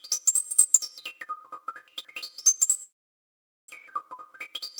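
Between 1.88 and 2.22 s the stream delivers its chunks out of order. One block of about 171 ms arrived or was written a single chunk late and is played after the block that should follow it. Nothing is lost, but the material is rearranged, so this passage sounds briefly jumbled, with three hard joins where mismatched chunks meet. From 2.83 to 3.70 s the cause is likely a long network dropout, during which no audio reached the receiver. Over that stretch of about 0.86 s, the gap is covered by a short fading buzz continued from the last sound, then by near silence lasting about 0.82 s. About 0.76 s of the original material is never heard. When sound resumes it picks up further along, with its timing shifted by around a tenth of a second.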